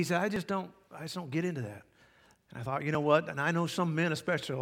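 At 0.36 s, 1.32 s and 2.95 s the speech jumps ahead, each time losing a brief slice of about 15, 15 and 10 ms, likely a dropped buffer (overrun). The waveform shows an abrupt discontinuity, and the spectrogram a thin vertical broadband line.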